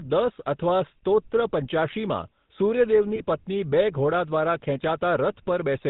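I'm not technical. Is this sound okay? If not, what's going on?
No. The speech went through the GSM full-rate codec, the old mobile-phone format. It rebuilds the voice from a rough model and cuts everything above 4 kHz, so the whole clip sounds muffled, buzzy and gravelly, like a poor phone call.

From 3.16 to 3.23 s there are lost GSM frames. A piece of the signal never arrived, and the phone filled the gap by repeating the last good sound. That brief stretch has a harsh, metallic ring. The gap is about 20 ms long, which fits a single lost frame.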